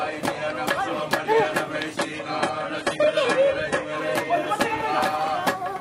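From 1.97 s to 3.97 s the stream drops abruptly to a lower bitrate, with no gap: treble above about 11.5 kHz vanishes, which points to an adaptive switch from roughly 96 kbit/s AAC to a very low-rate HE-AAC rendition.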